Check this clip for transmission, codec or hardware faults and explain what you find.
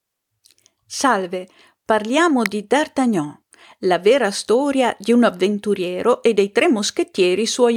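One fault turns up: an electrical switching spike at 2.46 s. A nearby switch, motor or static discharge likely arced for an instant, and the audio line picked up that burst of energy as a brief voltage jolt riding on the signal. It is heard as a sharp snap laid over the speech, sitting on top of the sound rather than replacing it.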